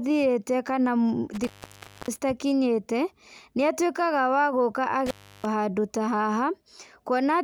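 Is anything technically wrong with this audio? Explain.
Yes, the speech has two intermittent contact faults, at 1.33 to 2.22 s and 5.06 to 5.45 s, just before "handũ ta". A loose connection briefly opens, for about 0.61 s and then 0.32 s, so the sound cuts out with crackle at each edge and faint hiss in the gap.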